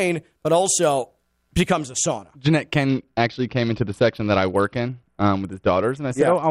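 From the start, the channels drift apart. The two sides run on clocks that disagree by roughly twenty parts per million. Their offset slowly grows to a fraction of a millisecond. Summed to mono, comb notches creep through the spectrum, giving a slow flanging on the speech.

At 2.89 s a Bluetooth SBC bit pool drop begins and lasts to the end. The sound points to the bit pool falling from 31 to 8, near 66 kbps. Upper sub-bands starve and coarse quantisation takes over. Treble goes dull and gritty noise rises.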